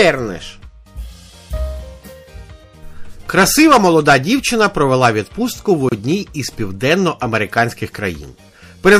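MP3 compression runs throughout and is plainly audible: the sound turns watery and swirly, with a dulled top end and smeared attacks, likely from encoding at 64 kbps. A gap at a join of encoded pieces opens from 5.89 to 5.92 s, a gap of about 29 ms where separately encoded segments were butted together untrimmed, so the encoder's start delay and end padding remain.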